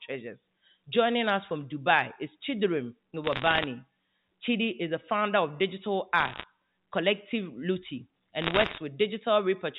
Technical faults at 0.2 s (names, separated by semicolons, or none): none